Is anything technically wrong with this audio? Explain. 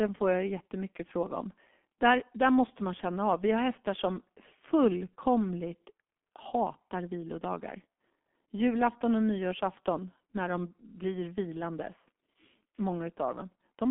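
Yes. Throughout the speech, the audio carries heavy G.723.1 codec damage. This low-rate telephony coder works in 30 ms frames at roughly 6.3 kbit/s and refreshes its model of the voice only slowly, so consonants smear and the tone turns hoarse and muffled. The line band runs from about 200 Hz to 3.5 kHz, and nothing survives above 3.7 kHz. On a spectrogram, energy stops at a flat ceiling near 3.7 kHz, with blocky, smeared texture within the band.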